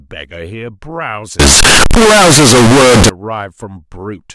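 Speech clip with a float-read-as-integer fault from 1.40 to 3.09 s: the audio turns into a near-square, very loud, harsh signal at an almost fixed high level, with background noise as loud as the speech. This likely comes from 32-bit float samples read as 32-bit integers.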